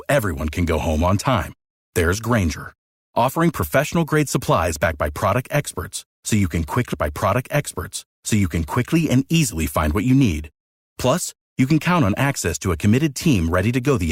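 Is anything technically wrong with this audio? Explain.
Yes. At 6.93 s, just after "experts so you can", a stream segment repeats: the player queued the same two-second chunk twice, so speech from 6.93 to 8.93 s plays again, with a small blip at the jump back, before "and easily find what". On a waveform or spectrogram, an identical two-second block appears twice, split by a sharp discontinuity.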